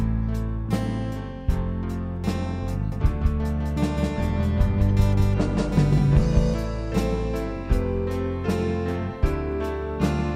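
From 2.92 to 6.54 s, a full-strength second copy trails about a fifth of a second behind: a doubled audio track, likely from a slower second capture path.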